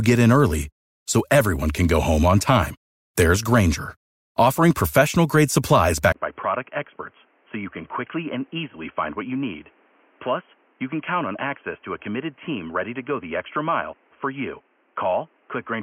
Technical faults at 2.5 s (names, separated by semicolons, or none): none